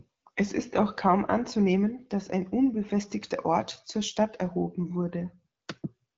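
Nothing stood out on listening to this speech clip, which carries the band-limited sound of AMR wideband (HD Voice) coding at 12.65 kbit/s with no content above about 7.7 kHz.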